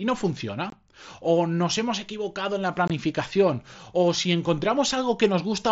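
At 0.70 to 0.73 s the speech drops out for about 23 ms. It happens again from 2.88 to 2.90 s, just after "hemos equivocado en la". Both gaps are unconcealed Bluetooth headset packet loss. Voice packets between the headset and the phone never arrived, and nothing was filled in to cover the hole. The length fits three lost frames of 7.5 ms each. Each gap has hard edges. The speech stops abruptly, then snaps back. Through the mSBC link, the speech carries up to 8 kHz with a light grain.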